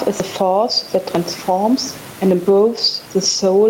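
Across the whole speech clip there is gain pumping: the room noise sits about 30 dB below the speech, and loud and soft parts are squeezed together, a swing of around 10 dB. The likely cause is input gain set far too high with a fast limiter clamping it. On a waveform the envelope looks flattened.

From 2.77 to 2.79 s there is a lost packet rebuilt from error correction: a 20 ms stretch, which points to a single lost packet, replaced by a coarse low-bitrate copy rather than a gap. It sounds briefly grainy and noisier, and a spectrogram shows a thin slice with smeared detail.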